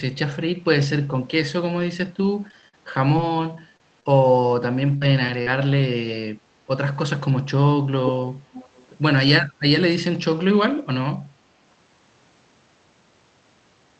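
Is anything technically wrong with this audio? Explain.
Yes, there are two kinds of fault.

From 2.23 s to 5.47 s the speech turns choppy, with about a dozen short holes, none longer than 50 ms and about a quarter of a second missing in total. This is repeated packet loss: audio kept arriving late or not at all, and each gap was covered by stretching the previous sound. Some of that patching sounds rebuilt rather than natural, and the holes come so close together that the stretch never settles.

At 8.06 s there is a brief, fairly strong delayed copy of the speech, nearly as loud as the original. A fainter one, much quieter than the speech, runs from 8.53 s to 8.86 s. Both trail the speech by 337 ms. This is echo leak, likely from a loudspeaker on the far end whose echo canceller let part of the picked-up sound slip back into the call.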